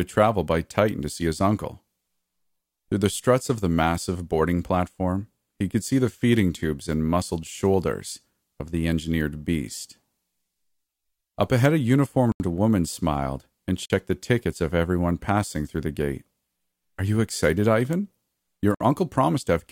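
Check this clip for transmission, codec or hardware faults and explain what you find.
The speech drops out three times, each a block of digital silence. Zeros went out instead of the audio, at 12.32 s for 80 ms, 13.86 s for about 45 ms and 18.75 s for 60 ms. Each cut is abrupt, a short hole with no fade.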